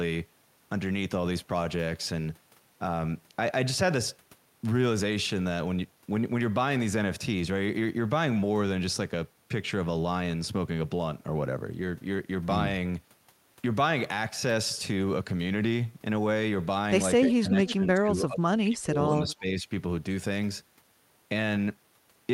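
From 17.28 to 18.99 s the speech dips by up to about 25 dB, likely speech suppressed in double talk: an echo canceller, facing both sides at once, attenuated the near talker along with the echo. A shorter, shallower dip of about 10 dB follows from 19.23 to 19.67 s, likely the same suppression. Inside the first dip, brief echo leak appears at 17.29 and from 17.67 to 17.74 s: copies delayed by about 320 ms, at about 10 and 15 dB below the speech, likely residual loudspeaker echo the canceller failed to remove.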